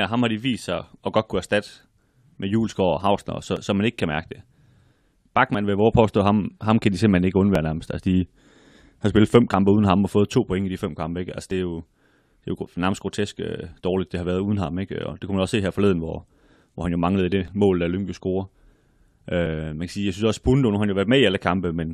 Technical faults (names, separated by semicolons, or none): overlap between stream segments